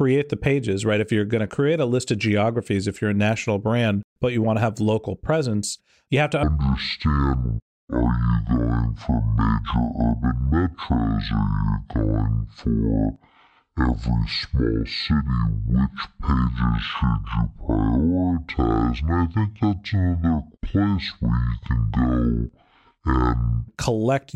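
From 6.43 s, after "presence you have to", to 23.68 s, before "collect user data", a section at the wrong speed runs at 0.52 times normal, likely from a clock mismatch. Pitch falls about ten semitones, so speech turns deep and dragging. The spectrogram's harmonics crowd downward, and waveform syllables stretch wider.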